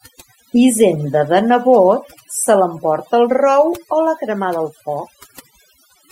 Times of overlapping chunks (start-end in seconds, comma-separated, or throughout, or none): none